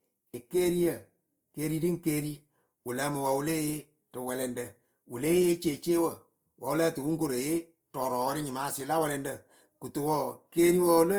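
A speech clip with Opus compression damage that is plainly audible from start to finish. The sound is grainy and rough rather than swirling. Fine detail in the upper bands has turned noisy, as if those bands were filled in rather than carried. The bandwidth stays wide, with content reaching about 20.2 kHz. That points to the music (CELT) mode at a low rate, which fits a bitrate around 24 kbps. This is likely the cause.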